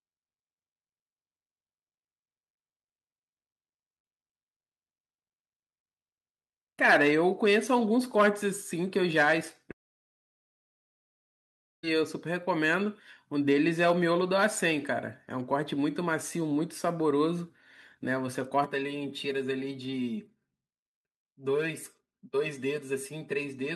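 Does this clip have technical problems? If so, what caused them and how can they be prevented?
Yes. From 9.71 to 11.85 s there is a long network dropout. About two seconds of audio never arrive: a short fading buzz is followed by near-silence, and the speech resumes further on with that stretch missing. A natural pause would not sound like this, because a pause loses nothing. The likely cause is an interruption in packet delivery. A more stable connection, a larger jitter buffer and forward error correction would prevent it.

From 18.64 s to the end, the speech turns hollow and phasey because of channel delay (comb filtering). One channel lags by roughly 5 ms, so summing to mono cuts notches starting near 100 Hz and repeating at even spacing. Reverb adds a tail, but these notches stay fixed and add no decay. Aligning the channels before any mono fold-down prevents it.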